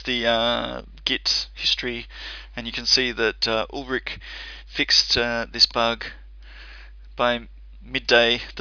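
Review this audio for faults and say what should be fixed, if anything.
Nothing here needs fixing; I listened through and didn't hear anything that would call for a repair.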